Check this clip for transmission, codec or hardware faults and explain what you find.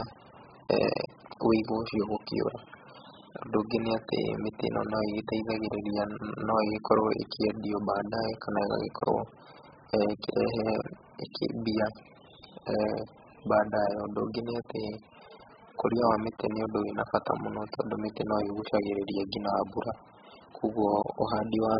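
One codec fault runs through the whole speech clip. AAC compression is heard throughout: nothing survives above 5.1 kHz, and the heavy coding leaves a dull, smeared, warbling sound with fizzy sibilants. The likely cause is AAC-LC starved of bits, which fits a very low bitrate near 8 kbps. The encoder drops the upper band and zeroes or noise-fills spectral lines between. On a spectrogram this shows as a hard ceiling at 5.1 kHz with blotchy gaps below.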